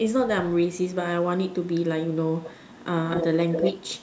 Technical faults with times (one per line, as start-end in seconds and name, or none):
1.63-1.72 echo leak
2.42-2.84 echo leak
3.09-4.02 echo leak